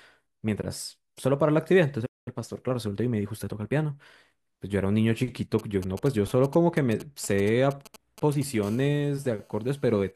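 At 2.05 s the player most likely ran short of data or had its output thread held up, so nothing reached the output until it recovered. The speech cuts off mid-flow into a playback stall of about 206 ms of silence, lasting to 2.28 s, and then resumes. The gap is long enough to be heard clearly as a hole in the sentence rather than a click.

From 2.28 s to 4.34 s the player works off the backlog that built up during the stall with time-compressed catch-up, removing short slices of audio and cross-fading across the joins. The result is speech running at about 1.1 times normal speed while keeping its pitch. It sounds slightly hurried.

Between 5.59 s and 8.43 s a nearby 2G handset is exchanging signalling with its network rather than carrying a call, sending only brief clusters of radio bursts. The audio circuitry rectifies those bursts into the signal. These GSM signalling bursts come through as a galloping dit-dit-dit of short raspy spurts of buzz at the 217 Hz burst rate, sitting somewhere around 20 dB below the speech.

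From 8.63 s to 10.11 s the phone is in a call and transmitting in bursts 217 times per second. Each radio pulse is again rectified by the audio circuit, producing GSM phone buzz, a steady, hard 217 Hz rasp rich in harmonics that has no relation to the speech. It runs about 31 dB below the speech, quieter than the earlier bursts but constant, giving a gritty drone under the closing section.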